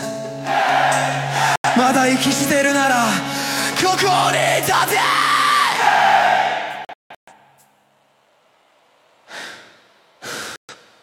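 At 1.56 s the audio drops out for about 85 ms, at 6.85 s it breaks into several short holes scattered over about 0.43 s, the longest about 0.17 s, and at 10.56 s it vanishes again for about 0.13 s. Each is a digital broadcast dropout, where the receiver lost valid frames and muted. Unlike concealed packet loss, nothing is smeared or repeated. The sound stops cleanly and resumes further on, with the missing stretch simply gone.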